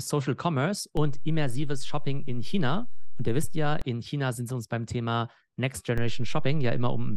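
At 0.97 s a DC step shifts the speech's zero line by about -22 dBFS, holding until 3.82 s; another, about -21 dBFS, begins at 5.98 s and runs to the end. Each edge thumps, showing as an offset waveform baseline and a brief low-frequency smear on the spectrogram.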